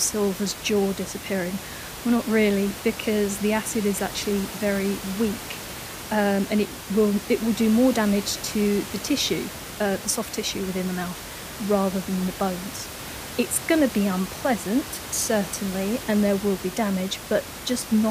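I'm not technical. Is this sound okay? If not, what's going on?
Yes, nothing here points to a technical problem.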